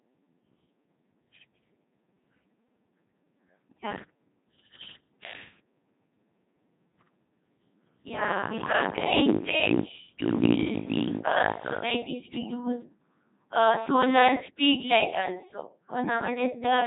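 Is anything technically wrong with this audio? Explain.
Yes. A Codec 2 vocoder runs throughout the clip. The coder does not keep the waveform: it sends only pitch, voicing, energy and a coarse spectral shape, and the decoder rebuilds the speech from a bank of sine waves. The damage here is heavy, fitting a 2.4 kbit/s mode, so the voice sounds robotic and buzzy, with a synthetic timbre. Nothing is present above about 3.8 kHz, which leaves the sound dull and narrowband.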